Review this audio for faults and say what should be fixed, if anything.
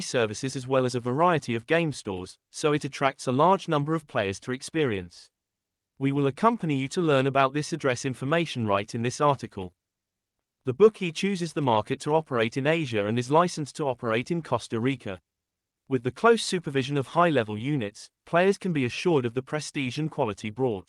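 Nothing stood out on listening to this speech recording, so there is nothing here that needs fixing.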